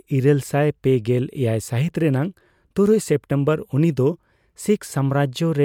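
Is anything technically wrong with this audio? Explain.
No, nothing is technically wrong with this audio.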